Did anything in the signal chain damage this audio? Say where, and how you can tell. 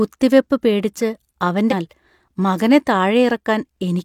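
Yes. Damaged data in a compressed stream, at the codec or storage stage, corrupts the speech from 1.68 to 1.74 s. For about 60 ms, a burst of corrupted bytes led the decoder to misread frames, lose sync and hunt for the next valid frame header.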